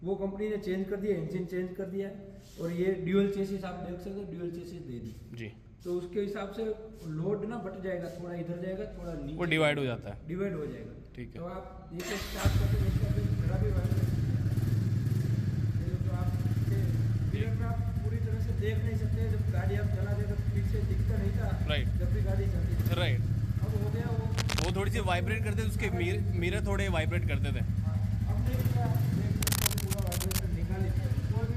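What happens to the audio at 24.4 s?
Cable scratch noise runs from 24.31 to 24.70 s. It sounds like a loud scratching rustle just under the sound, likely from a worn connector being moved.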